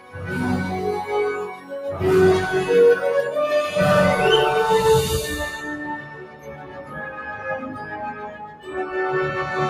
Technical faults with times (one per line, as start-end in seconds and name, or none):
0.00-9.69 noise suppressor applied to music or sounds
0.00-0.24 sound cut by the noise suppressor
1.47-1.72 sound cut by the noise suppressor
5.56-8.68 sound cut by the noise suppressor